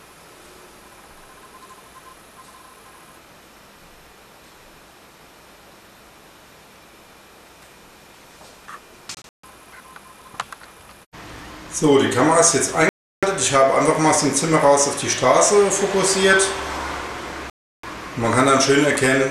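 Digital broadcast dropouts at 9.15 to 9.44 s, 12.89 to 13.23 s and 17.50 to 17.84 s: the receiver stopped getting usable frames and muted until clean ones arrived. The first breaks into short holes, about 190 ms of silence scattered across 290 ms with the longest gap 144 ms. The later two are solid 336 ms silences. In each, the sound cuts out or quickly fades and resumes further on, with the missing stretch lost.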